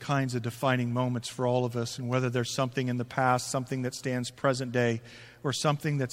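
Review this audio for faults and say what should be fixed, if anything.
Nothing stood out on listening to this speech recording, so there is nothing here that needs fixing.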